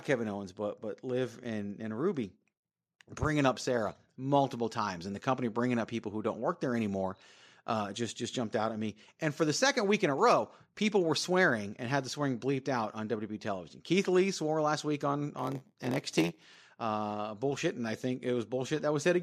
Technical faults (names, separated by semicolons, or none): block size mismatch (padded)